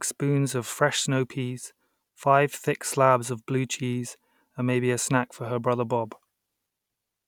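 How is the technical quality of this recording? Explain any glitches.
The speech recording has no technical faults to report. Nothing in it calls for an explanation.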